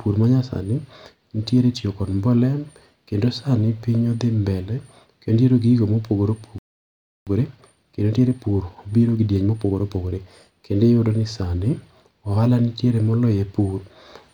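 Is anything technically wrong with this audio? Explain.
Yes, there are two faults. From 6.58 to 7.27 s a playback stall silences the speech for about 0.68 s, likely because the player's buffer ran dry. From 7.27 to 10.27 s a time-compressed catch-up runs at 1.15x. Small segments are cut and cross-faded to clear the backlog, so the speech sounds hurried at normal pitch.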